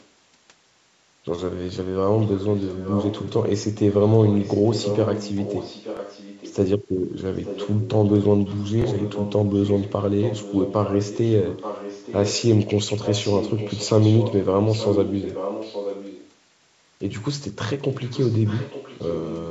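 Echo leak is first heard as a very faint trace from 0.00 to 0.07 s. It returns clearly, about 10 dB below the speech, from 2.2 to 6.56 s, 7.36 to 7.9 s, 8.46 to 12.43 s and 13.02 to 16.32 s, and somewhat fainter from 17.92 to 19.49 s. It is a copy of the speech arriving 879 ms late, most likely because a far-end loudspeaker's echo canceller let the pickup through.

Bluetooth stutter occurs at 5.97 to 5.99 s, 8.82 to 8.84 s and 16.86 to 16.88 s. Each is a 21.3 ms slice replayed once, a brief repeated blip consistent with a single lost packet, before the speech resumes as though it had kept playing.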